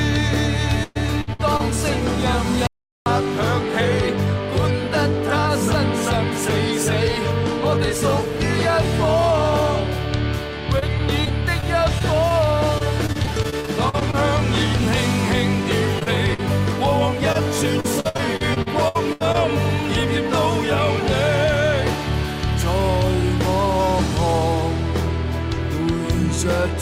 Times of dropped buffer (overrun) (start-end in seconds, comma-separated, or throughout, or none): none